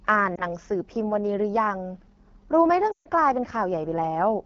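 AMR wideband (HD Voice) codec throughout: the speech is coded as a pulse-driven vocal tract model up to 6.4 kHz, with noise filling the band to 7 kHz. Its plainly rough, raspy texture fits one of the two lowest modes, 8.85 kbit/s.

Lost AMR speech frames at 0.36 to 0.45 s and 2.91 to 3.08 s: failed frames forced the decoder to repeat the last pitch and vocal tract settings at falling gain. The first is a brief dip or warble, fitting one lost frame. The second, about 140 ms, drops to near silence within two frames before the speech returns weak or rough.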